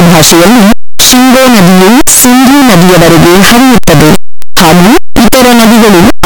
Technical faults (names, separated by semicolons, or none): signed and unsigned mixed up